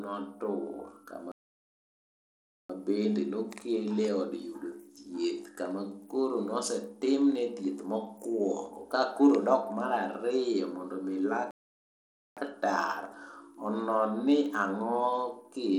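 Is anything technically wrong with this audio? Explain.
Yes. Throughout, the treble is dull and flickering, with gritty noise riding on the speech. This is likely Bluetooth SBC compression, starving the top sub-bands at a low bitrate near 96 kbps.

Two playback stalls occur, at 1.32 to 2.70 s and 11.51 to 12.37 s. The sound cuts out for about 1.4 s and 0.86 s, likely because the player ran out of data.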